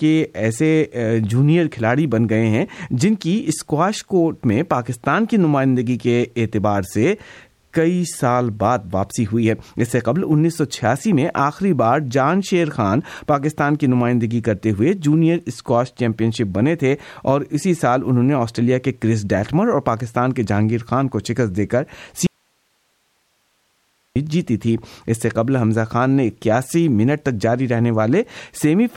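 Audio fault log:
22.27–24.16 s, audio dropout to a faint residue: the speech cuts out abruptly for 1.89 s, leaving only faint hiss about 45 dB below the signal, then snaps back mid-flow. The likely cause is a brief loss of the source while the path after the break stayed live.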